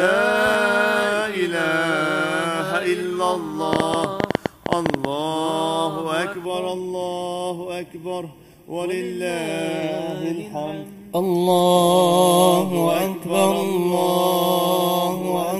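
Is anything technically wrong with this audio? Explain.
Yes, there are two faults.

From 3.73 to 5.06 s there is a train of clicks. About fifteen similar pops arrive unevenly, roughly 11 per second. They stand out sharply above the sound. They are likely caused by interference from nearby equipment or a faulty connection or power supply.

From 6.45 s to the end, channel delay causes comb filtering. One channel lags the other by a fraction of a millisecond, and the mono sum cancels at evenly spaced frequencies, starting near 1.5 kHz. The sound turns hollow and phasey.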